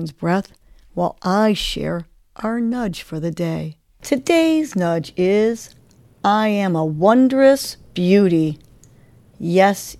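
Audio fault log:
No faults heard.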